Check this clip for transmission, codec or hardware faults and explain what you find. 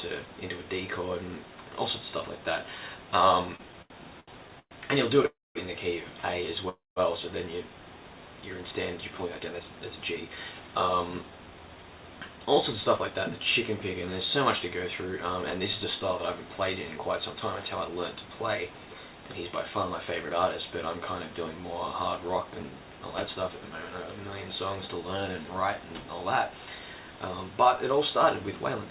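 Five faults stand out, all typical of audio carried over a network call. The sound is band-limited, with nothing above 4 kHz, which fits narrowband G.711 A-law coding at 64 kbps.

Repeated stalls (stutter) run from 3.56 to 5.27 s. The sound catches and drags through ten short hitches, the longest 117 ms. Together they fill about 357 ms, roughly a fifth of that stretch. Packets were arriving late or too slowly, so the jitter buffer kept running dry. Each time, the receiver stretched the last sound until real audio resumed. Nothing is lost, but the flow is broken up.

Two call audio freezes follow, at 5.27 to 5.58 s and at 6.69 to 6.99 s. In each, the sound hangs as a brief fading continuation and then drops to silence, for 220 ms and 180 ms respectively. Playback then picks up where it stopped. The likely cause is packets held up in transit, emptying the jitter buffer. This inserts pauses of 285 ms and 272 ms rather than removing anything.

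Jitter buffer speed-up occurs from 8.98 to 13.10 s and from 22.18 to 23.50 s. The audio sounds hurried at unchanged pitch, running at 109% and then 107% speed. The buffer held more audio than it aims for. To cut the backlog, the receiver trimmed many tiny pitch-period slices. It removed about 0.4 s in the first stretch and about a tenth of a second in the second.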